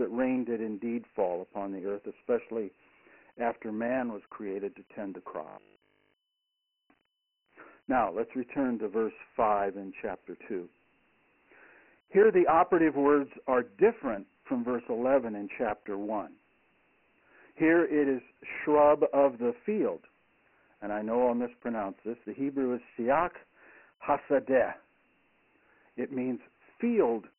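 The whole speech clip sounds thin and gritty, with hiss trailing the syllables and nothing above 3 kHz. That is Dialogic VOX ADPCM: coarse 4-bit steps at a rate near 24 kbps, which fits 6,000 samples a second and cuts the band at 3 kHz.

From 5.48 to 6.82 s, right after "created to tend the", the speech turns into a rigid metallic 50 Hz buzz that only loosely follows the words. This is robotic sound from repeated short buffers: audio likely arrived too late, so roughly 20 ms chunks were replayed over most of that stretch.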